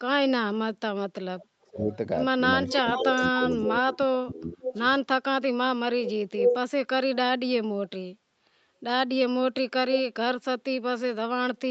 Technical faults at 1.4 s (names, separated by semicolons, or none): echo leak